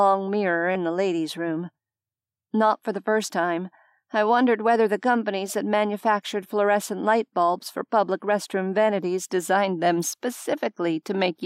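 At 0.70 to 0.76 s there is a corrupt frame decoded. Damaged bits in a couple of compressed frames were played as if valid. Misread gains and codes put energy at the wrong frequencies. It sounds like a brief blip or burst of noise, peaking around -15 dBFS.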